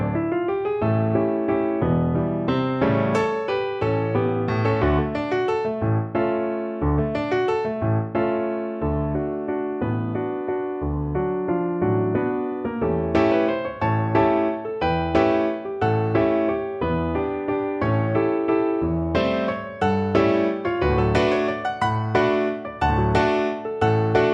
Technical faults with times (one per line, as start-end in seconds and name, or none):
none